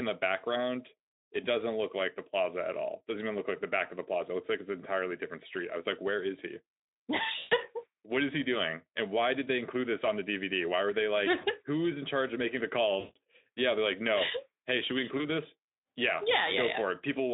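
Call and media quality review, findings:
VoIP packet loss concealed by the speech codec: buzzy or noisy smeared dropouts fading out, at 7.39–7.55 s, after "were they like" 11.41–11.46 s, after "charge of making the" 12.99–13.17 s, after "should we" 15.17–15.26 s. Decoder extrapolating, longest gaps fit roughly 120–160 ms lost, over a narrowband Speex line.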